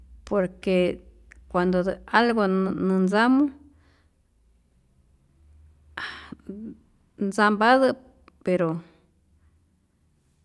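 Nothing goes wrong anywhere along the way here; there's no technical fault to point to at any moment in this speech recording.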